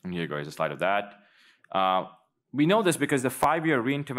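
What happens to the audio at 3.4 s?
Chunks out of order at 3.43 s: one short chunk of about 5.8 ms arrives a single chunk late and plays after the one that should follow it. Nothing is lost, but the swapped order creates three hard joins, heard as a brief jumbled moment.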